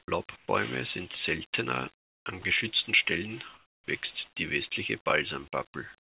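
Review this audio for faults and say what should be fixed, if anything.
Sound dropped by the voice detector at 0.00–0.08 s, at 2.42–2.44 s just after "sind seltener an", and at 3.54–3.88 s. The speech gives way to flat noise, likely because the sender's detector mistook soft speech for background, losing about 40, 20 and 130 ms. On a spectrogram, speech harmonics stop abruptly and a uniform smear takes their place. On a waveform, the speech envelope flattens into low, even hiss.

Comfort noise in place of the background at 0.36–0.48 s before "sind seltener an geschützten", at 1.98–2.26 s between "sind seltener" and "an geschützten", and from 6.02 s to the end. The real room tone is swapped for featureless synthetic noise, about 2, 10 and 12 dB quieter. This is likely due to discontinuous transmission during pauses. A spectrogram shows a smooth, textureless band with visible level steps at the edges.

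To prevent both, disable discontinuous transmission, or use a less aggressive voice detector with longer hangover time.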